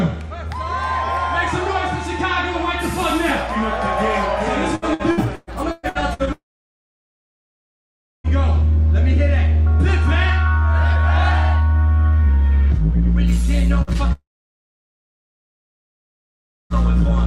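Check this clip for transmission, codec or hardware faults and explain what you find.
The clip has network transmission faults in four places. From 4.75 to 6.30 s there is repeated packet loss (robotic sound): ten gaps, the longest 118 ms, are patched with extended sound, covering about a third of the span, so the audio turns choppy. From 6.33 to 8.27 s and again from 14.12 to 16.73 s, the sound briefly carries on as a fading tail and then goes silent for about 1.8 s and 2.5 s respectively before returning with material missing, likely a long network dropout each time. At 13.82 to 13.90 s a burst of packet loss removes about 60 ms, bridged by a short fading continuation of the preceding sound.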